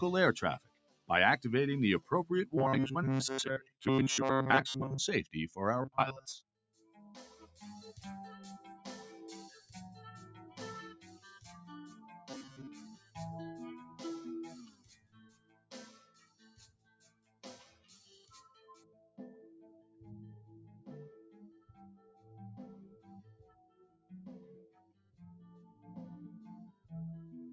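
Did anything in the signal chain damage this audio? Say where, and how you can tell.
Yes. In the call processing, a speech noise suppressor stayed active on non-speech sound and pushes sustained material up and down by about 15 dB, so the audio pumps and thins.

In the same call processing stage, that suppressor misread sound as noise and ducked it at 0.59–1.09, 6.56–6.92, 12.96–13.16, 14.7–20.03, 20.72–20.88, 21.54–22.3, 22.88–25.88 and 26.72–26.91 s, with drops of up to about 16 dB. Held sound and tails sink.

At the driver or buffer stage, robotic sound from repeated short buffers appears at 2.58–4.98, 5.82–6.42 and 12.30–12.67 s. A fixed 133 Hz buzz is heard, likely from a roughly 7.5 ms buffer looped in place of most of the real audio.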